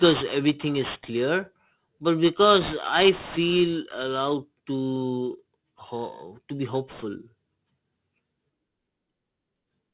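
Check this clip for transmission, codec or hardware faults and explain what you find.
One fault is present: aliasing, audible throughout the speech.

The audio was downsampled without filtering, which fits an 8 kHz rate, so content above 4 kHz folds back below it, roughly 15 dB under the speech. Sibilants turn gritty and metallic, and a spectrogram shows mirrored, unrelated energy packed hard against a 4 kHz edge.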